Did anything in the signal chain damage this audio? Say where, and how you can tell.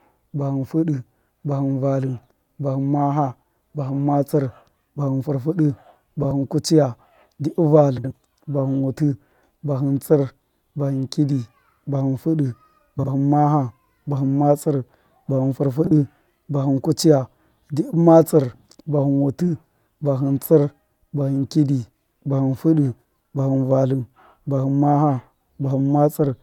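Yes. Frames out of order, at the network stage. Speech garbles into a brief flutter at 6.22–6.31 s, 7.98–8.12 s, 12.99–13.08 s and 15.84–15.91 s. Neighbouring blocks of 33 to 76 ms arrived swapped and were decoded that way. No time is lost.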